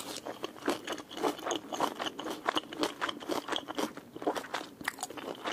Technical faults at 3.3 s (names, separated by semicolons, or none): none